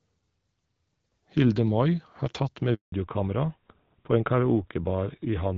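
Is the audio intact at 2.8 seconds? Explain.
No. At 2.8 seconds the audio falls inside a handover gap running from about 2.74 to 2.92 s, roughly 180 ms, just after "har tatt med". While the call switched from one network to another, no speech frames reached the decoder, so the sound fades out within a few tens of milliseconds and stays silent until the new link picks up. Whatever was said during that time is lost.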